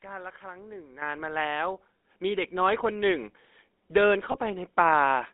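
A buzzy, gravelly roughness runs through the whole of this speech recording, and the sound is confined to a narrow telephone band of roughly 250 Hz to 3.6 kHz, with the damage plainly audible throughout. That texture is the GSM full-rate codec. It rebuilds the voice from a vocal-tract model excited by a sparse, regularly spaced pulse train rather than the true waveform, and the character fits the 13 kbps full-rate coder. Loudness also jumps abruptly three times. Voice and background rise together by about 8 dB at 1.02 s, about 4 dB at 2.04 s, and 1 dB at 3.06 s. Each is the microphone volume stepped up: the call software judged the input too quiet and raised the device gain in a single step, with shrinking corrections each time. From 4.32 to 4.38 s the sound briefly freezes into a rough, metallic ring before normal speech resumes. These are lost GSM frames. The decoder filled the gap by reusing the parameters of the last good frame, which fits a single missing 20 ms frame whose concealment tail stretches the disturbance to nearly 60 ms.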